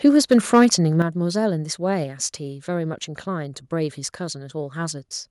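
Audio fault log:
0.04–0.66 s, microphone overload: the loudest speech peaks turn harsh and crackly, likely because input gain drove them about 4 dB past the converter's ceiling. The waveform shows flat-topped peaks on a few percent of samples, and the spectrogram shows broadband vertical smears at each clipped burst.
1.02 s, microphone volume stepped down: speech and background noise both drop about 8 dB in one abrupt step, likely an automatic input-gain cut after the earlier distortion. The waveform envelope shrinks instantly, and the spectrogram darkens evenly across all frequencies at that point.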